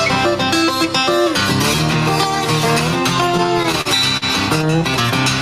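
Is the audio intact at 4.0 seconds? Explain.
No. From 3.37 to 4.24 s there are repeated stalls (stutter). Late packets drained the jitter buffer seven times, and the receiver stretched the last sound to fill each gap, the longest being 44 ms, so the audio drags and stutters without losing anything. Gain pumping is also present here. The gain swings by about 5 dB, likely from excessive gain pushed against a fast limiter.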